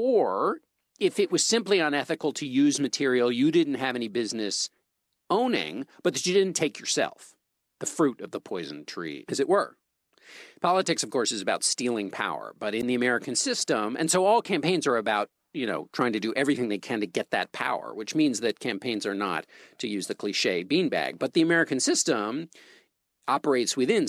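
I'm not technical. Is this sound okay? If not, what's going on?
No. There is one problem, a wireless microphone squelch dropout, from about 12.79 to 12.83 seconds. The voice is carried by radio from the microphone to a receiver. For a moment that radio signal grew too weak. The receiver then shut off its output so it would not play static. You hear a quick burst of hiss, then a tiny gap of near silence lasting about 13 milliseconds. Then the voice comes back.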